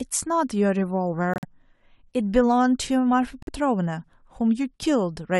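At 1.34 s the speech drops into a hole lasting about 0.12 s, ending at 1.45 s, and at 3.43 s a shorter gap of about 0.07 s follows. Both are a corrupt frame muted: damaged compressed frames were rejected by the decoder and replaced with silence. Each gap starts abruptly, and their lengths fit roughly four and two frames. Timing around both gaps is preserved, with nothing shifted later.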